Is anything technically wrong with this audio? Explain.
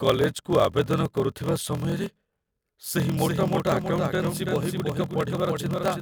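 Yes, there are two faults.

Throughout the clip there is a block size mismatch (padded). Each block is followed by a short run of zeros, which fits 1024-sample blocks read into slots about 1150 samples long. This causes a steady 41.7 Hz buzz, and the speech runs at 0.889 of normal speed with its pitch roughly unchanged.

From 3.17 s to the end there is a doubled audio track. A second full-band copy of the speech trails by roughly 300 ms at around 5 dB below the original, with no decay or room colour. It cuts in abruptly, likely from a second, slower capture path mixed in.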